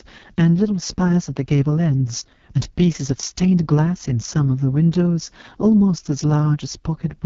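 AMR wideband (HD Voice) codec damage runs through the whole of this speech clip: it sounds rough and raspy, which fits the codec's lowest 6.6 kbit/s mode, where the pulse-driven vocal tract model has too few bits, and nothing is heard above 7.1 kHz.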